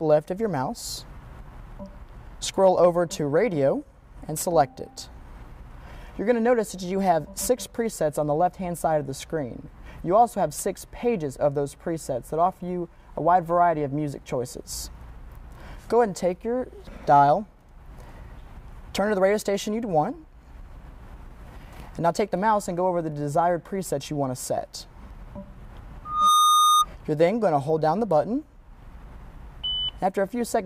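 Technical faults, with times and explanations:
26.05 to 26.85 s, loudspeaker feedback squeal: a pure tone at 1.2 kHz swells out of the audio over roughly a third of a second, peaks at about 5 dB above the surrounding sound, and stops after about 0.8 s in total. A microphone was hearing its own loudspeaker, and at 1.2 kHz the loop gain passed one, so that frequency fed on itself. A spectrogram shows a single bright horizontal line at 1.2 kHz. The waveform's envelope balloons there.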